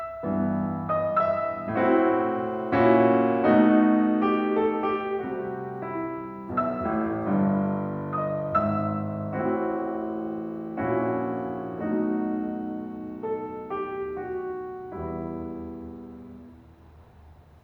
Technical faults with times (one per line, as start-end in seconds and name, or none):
none